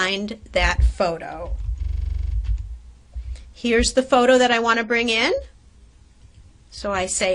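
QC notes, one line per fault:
1.84–2.35 s, system hang loop: a 42.67 ms slice of audio repeats exactly, about 12 times, giving a hard, rattling buzz at 23.4 Hz. The output hardware kept replaying its ring buffer while the host stalled, which fits a 2048-sample buffer.
4.37 s to end, adaptive stream at a lower bitrate: quality drops abruptly with no gap, and codec artefacts rise. The stream switched to a lower-bitrate version, which points to a step down from AAC at 96 kbit/s to 32 kbit/s.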